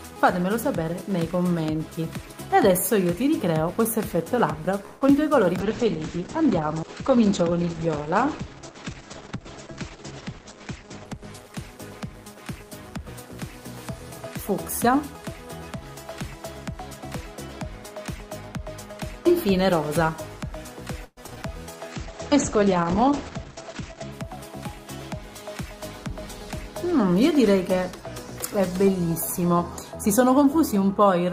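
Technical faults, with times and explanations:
4.85 to 5.03 s, call audio freeze: For about 160 ms the sound is held as a fading continuation of what came just before, then resumes exactly where it left off, with nothing skipped. The likely cause is packets held up in transit until the jitter buffer ran dry, with the receiver bridging the wait. Unlike packet loss, no audio is missing here; the stall instead pushes everything after it about 160 ms later.
5.07 to 5.10 s, short concealed packet loss: Immediately after the stall, about 40 ms of audio is simply gone, marked by a brief smear where the receiver blends in only about 4 ms of patched sound before rejoining the real signal. Unlike the freeze, content is actually lost here, which is why it registers as a brief smear rather than a hold. It also takes back about 40 ms of the delay that the freeze had added.
5.60 to 12.33 s, call bitrate drop: The encoder's rate falls from 32 to 9 kbps and stays at its lowest for about 5 s. 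Audio bandwidth narrows from 20 kHz to 8 kHz, so the sound turns muffled, rough and watery. It changes tone and detail but not timing, which distinguishes it from the buffer adjustments that overlap it.
10.25 to 12.98 s, jitter buffer speed-up: Running at about 105%, the receiver trims short pitch-period slices repeatedly, removing something like 150 ms in total to work off excess buffered delay. Pitch stays unchanged, so the sound just feels a little hurried, and in the overlap with the bitrate drop it is both dull and rushed.
21.05 to 21.45 s, repeated packet loss (robotic sound): Five gaps in quick succession, the longest 124 ms, leave about 40% of this stretch patched: roughly 162 ms is synthesised and about 80 ms is lost outright. Each patch repeats the last sound before the next hole arrives, producing a choppy sound with pieces missing. That repetition is what separates it from the single brief loss at 5.07 s.
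21.71 to 21.94 s, jitter buffer slow-down: The receiver repeats pitch periods to add about 48 ms and rebuild its reserve, so playback runs at about 83% speed. Pitch holds steady while sounds are drawn out. This is the opposite of the speed-ups: the sound is stretched, not compressed.
21.95 to 24.17 s, call bitrate drop: Again 32 falls to 9 kbps, with about 2.15 s at the floor, and bandwidth shrinks from 20 kHz to 8 kHz. The result is the same muffled, coarse coloration as the first drop, but shorter.
23.29 to 24.37 s, jitter buffer speed-up: At about 110%, faster than the earlier speed-up, roughly 100 ms is trimmed in small slices. The sound is noticeably hurried at unchanged pitch, overlapping the tail of the second bitrate drop.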